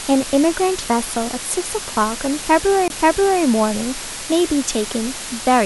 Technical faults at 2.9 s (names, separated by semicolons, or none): low bit depth with dither; CD skip